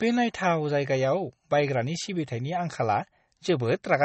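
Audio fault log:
Throughout: MP3 compression, likely. Nothing sounds above 8.4 kHz, so the treble is dull and the s sounds lose their edge. The sound is watery and swirly, with weak detail flickering in and out between frames. This fits a starved bitrate near 32 kbps.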